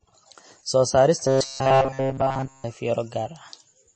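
From the first moment the speech has the wash of heavy MP3 compression, likely from a low-bitrate encode, with the damage plainly audible. Nothing comes through above 8.3 kHz, so the top end is sliced off flat. The encoder seems starved of bits, somewhere around what you'd expect from 32 kbps, so quieter frequency detail keeps dropping in and out between frames. That gives the voice its swirly, watery texture, and the s sounds come out chirpy and metallic.

Then from 1.27 to 2.65 s the speech turns into a robotic sound from repeated short buffers, most likely because audio stopped arriving on time. While it waited, the playback kept looping a tiny slice of what it already had, and for essentially that whole stretch you're hearing repeats rather than fresh audio. The buzz sits at 134 Hz, which points to a buffer of roughly 7.5 ms. It imposes a stiff, metallic drone that only loosely tracks the speech underneath.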